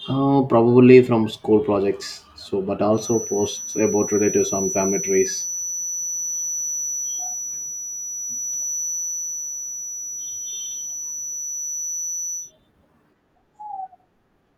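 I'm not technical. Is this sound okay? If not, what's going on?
No. A feedback whistle runs from about 2.9 to 12.5 seconds: a thin, steady high tone near 5.9 kHz sits quietly behind the speech, slowly swelling and fading. It's likely a loudspeaker feeding back into the microphone, hovering right at the edge of full howl.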